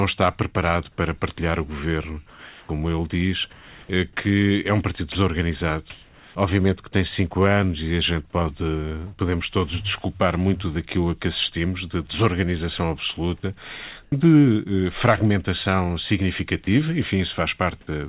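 Speech recorded over a narrowband call path, with nothing above 4 kHz, consistent with 64 kbit/s G.711 mu-law, and with several discontinuous-transmission faults. Comfort noise in place of the background appears in the pauses at 2.3 to 2.69 s, 3.53 to 3.89 s, 5.9 to 6.35 s and 14.03 to 14.12 s. In each, the real background, which sits roughly 24 to 33 dB below the loudest speech, gives way to a smoother synthetic noise. That noise is about 2 dB quieter in the first two gaps, about 2 dB louder at 5.9 s, and about 12 dB quieter in the short 90 ms gap after "assistimos de desorganização absoluta". The likely cause is the sender halting transmission during detected silence and the receiver synthesising a rough noise estimate until speech resumes. Sound dropped by the voice detector occurs at 5.12 to 5.15 s, right after "que é um partido": 30 ms of sound is replaced by comfort noise, likely because the detector judged that sound to be background. 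Onset clipped by the voice detector occurs at 14.1 s, after "assistimos de desorganização absoluta". The next sound enters abruptly with its first 20 ms missing, likely because the detector reacted late and the receiver filled the gap with comfort noise.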